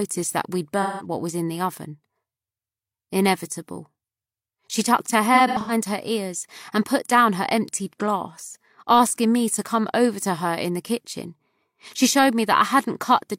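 A smeared, noisy patch runs from 0.82 to 1.06 s, and a broken, phasey stretch follows from 5.34 to 5.71 s, with the longest single dropout about a tenth of a second. Both are AAC frame loss with concealment: missing frames, about 171 ms in the first and about 213 ms scattered through the second, were filled in by the decoder from the last good spectrum.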